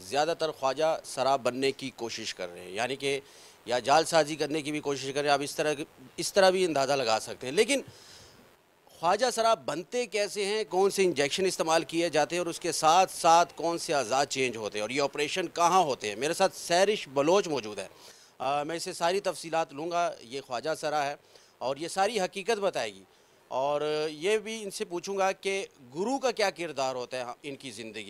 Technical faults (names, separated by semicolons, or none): chunks out of order